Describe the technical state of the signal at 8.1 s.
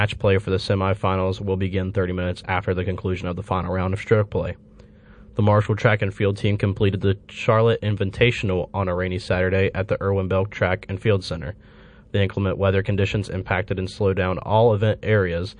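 Right at 8.11 to 8.13 s, just before "on a rainy", there's pre-echo: a short hiss, about 11 dB up, creeps in roughly 24 ms ahead of the attack. The codec smeared its quantisation noise across a long block, about 52 ms, without dropping to short blocks, so the onset sounds softened.

Underneath that, the whole stretch has plainly audible MP3 compression, likely from a low-bitrate encode around 40 kbps. Weak frequency lines flicker on and off between frames, giving a watery, swirly edge to the speech.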